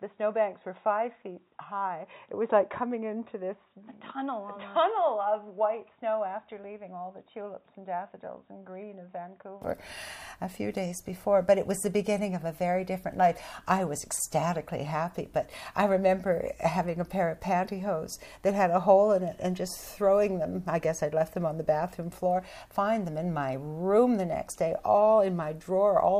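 From the start to about 9.62 s the sound is dull and boxy, with nothing above 3.8 kHz, roughly 10 dB quieter, and a faint new noise floor well below it. That's likely an input switched to a poorer device, and it clears up with no gap at all.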